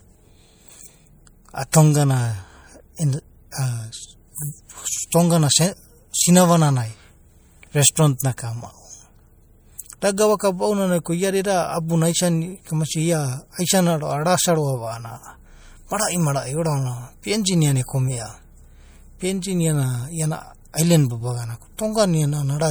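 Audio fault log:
throughout: MP3 compression. The likely cause is an MP3 encoder short of bits, as at 64 kbps, zeroing weak frequency lines that flicker between frames. The speech sounds plainly watery and swirly, while content still extends to 21.1 kHz.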